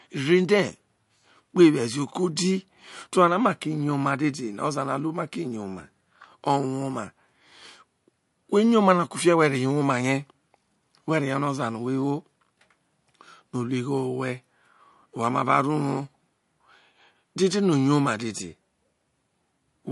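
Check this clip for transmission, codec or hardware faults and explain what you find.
One fault runs through the whole clip. MP3 compression, throughout: nothing is left above 11.3 kHz, and the damage is plainly audible. A starved MP3 encoder, which fits a bitrate near 49 kbps, is the likely cause. It cuts the treble and drops weak frequency lines frame by frame, leaving the speech watery and swirly.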